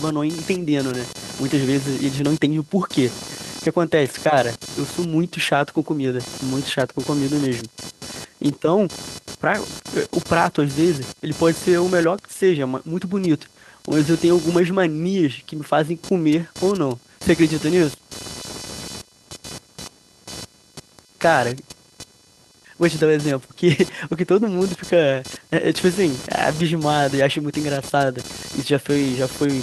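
Throughout the clip, computer activity noise sits under the speech: a buzzy, chirping pulse near 500 Hz, roughly 15 dB below the voice. Unlike steady mains hum, it swells and shifts with processor load pulling on the shared audio ground, ignoring the speech entirely.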